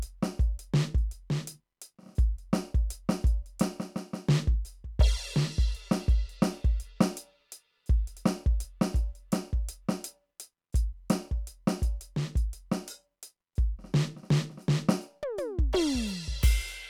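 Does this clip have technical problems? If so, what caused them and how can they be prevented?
No, this music clip has no technical problems, so there is nothing to prevent.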